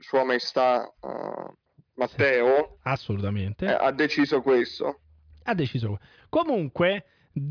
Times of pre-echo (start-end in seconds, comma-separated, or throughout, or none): none